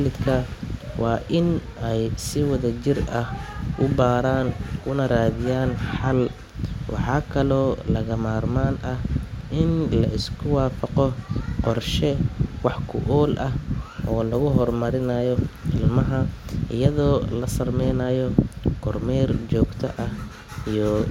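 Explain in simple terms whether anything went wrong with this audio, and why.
Nothing went wrong with this audio, because the speech comes through steadily with nothing in it that sounds like a fault.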